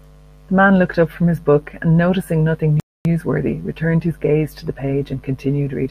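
At 2.80 s the player runs out of downloaded audio, a rebuffering stall, so the speech drops to silence until 3.05 s, then resumes exactly where it stopped, adding 252 ms.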